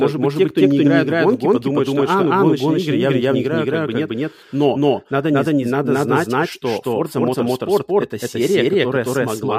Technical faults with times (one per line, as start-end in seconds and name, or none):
0.00-9.58 doubled audio track